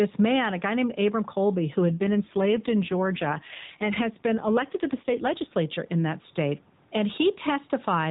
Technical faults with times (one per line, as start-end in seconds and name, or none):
0.00-8.11 gain pumping
1.88-5.55 AMR rate drop